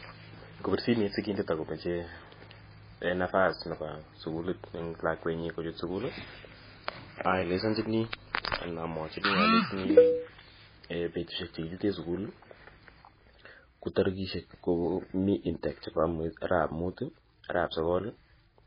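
From start to finish the audio sounds dull and watery, with a swirling, unstable texture and nothing at all above 5 kHz, so the top of the speech is simply gone. The likely cause is heavy MP3 compression at a very low bitrate, which fits a rate around 16 kbps. Starved of bits, the encoder cuts the treble at a fixed frequency and discards weaker frequency components, which flicker in and out from frame to frame and produce that wavering, underwater quality.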